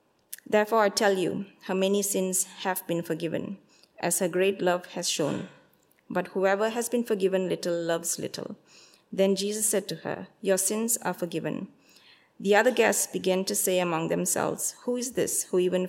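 No technical fault can be heard anywhere in the audio, and the signal holds together steadily from its opening moment to its last.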